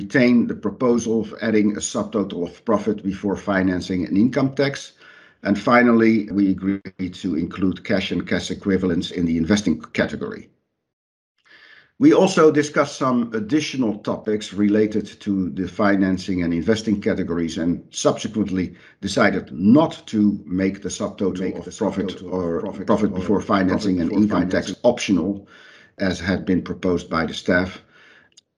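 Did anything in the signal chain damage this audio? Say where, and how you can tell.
Yes. From 21.28 to 24.74 s there is a doubled audio track: a second full-band copy of the audio trails the original by roughly 0.7 s, sitting about 10 dB lower. It has no decay or room colouring, and it appears and vanishes abruptly at those two times, so it is not acoustic reflection. The likely cause is a second, slower capture path or an edit that briefly held two out-of-step copies.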